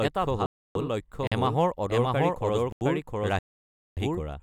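In this speech recording, the whole clip carries a doubled audio track, likely from the signal being captured a second time by a slower path: a full-band copy of everything trails the original by roughly 0.7 s at about the same level. Because that second copy has no decay or room colour, it sounds like a flat, overlapping repeat of the speech rather than an echo. Twice, playback stalls, likely a Bluetooth stall where interference holds back packets and the headphones' buffer runs dry. The sound drops to silence from 0.46 to 0.75 s (292 ms) and again from 3.39 to 3.97 s (580 ms), then resumes. Separately, there are two blocks of digital silence, where runs of samples were replaced by zeros, cutting hard to dead silence and back with no fade. The first, from 1.27 to 1.32 s, lasts about 43 ms, which fits a 2048-sample block. The second, from 2.72 to 2.81 s, lasts about 85 ms, consistent with a 4096-sample block. 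Both gaps are long enough to come across as brief holes in the speech.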